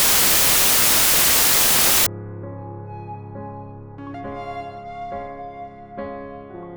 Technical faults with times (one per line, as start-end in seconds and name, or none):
0.00-2.06 samples built from the wrong bytes